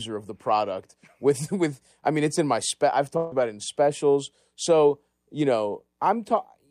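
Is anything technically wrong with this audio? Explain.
Yes. At 3.17 to 3.33 s, right after "in my spec I've", a burst of packet loss removes about 140 ms. The receiver stretches the last sound and turns it down as it goes, then jumps ahead to "about it in specials". On a spectrogram, a frozen, fading copy of the last sound appears before an abrupt restart.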